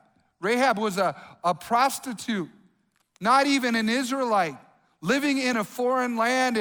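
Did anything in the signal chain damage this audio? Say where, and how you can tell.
Yes. There is a block of digital silence at 5.53 s in this speech clip. The hole lasts about 0.73 ms, so it is heard as a single tick rather than a gap. The damage sits at the driver or buffer stage. The signal drops to silence and returns with no fade. Each edge is a hard step, which makes the click. The length fits a 32-sample block left unfilled when the output buffer was not written in time.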